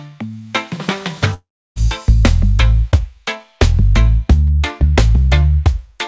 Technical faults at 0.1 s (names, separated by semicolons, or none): none